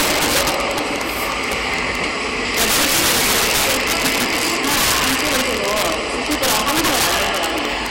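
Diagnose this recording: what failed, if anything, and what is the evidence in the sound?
Integer overflow in the sample-format conversion stage, present throughout. The loudest peaks crack violently rather than flattening, far harsher than clipping. The signal is driven about 13 dB too hot, and the few percent of samples past full scale wrap to the opposite sign instead of being limited.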